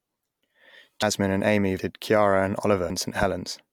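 At 1.02 s, 1.79 s and 2.90 s the speech jumps forward, skipping about a tenth, three tenths, and a tenth of a second. There's no gap of silence, unlike a dropout, which points to a likely dropped buffer (overrun).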